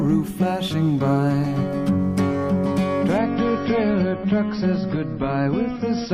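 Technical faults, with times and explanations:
3.18 to 6.13 s, adaptive stream at a lower bitrate: treble abruptly stops near 5.8 kHz with smeary artefacts, fitting a 128 to 24 kbit/s MP3 switch, seamless rather than a dropout.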